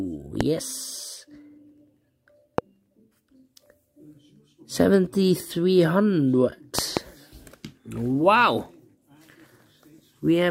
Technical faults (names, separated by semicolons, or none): loud pop; bit error spike